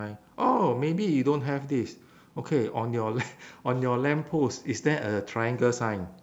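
Throughout the speech, quiet passages and decaying syllable tails turn grainy and gritty, with the roughness rising and falling with the voice rather than sitting as steady hiss. The likely cause is low bit depth without dither, rounding that fits about 10 bits, with error roughly 45 dB below the signal.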